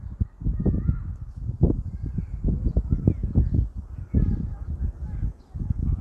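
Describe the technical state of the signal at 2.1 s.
At 2.1 s the sound is intact, with no dropout, glitch or distortion, and only the ordinary band-limited character of the Opus call path, whose top end stops around 12 kHz.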